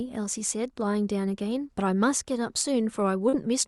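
Near the end of the speech, from 3.29 to 3.36 s, there is short concealed packet loss: about 40 ms of the call's audio failed to reach the decoder in time, and the receiver patched roughly 34 ms of that gap by extending the preceding sound before crossfading back into the real signal. The splice is audible as a brief smear or wobble. The call codec's bandwidth, which reaches up to about 12 kHz, is heard across the whole clip.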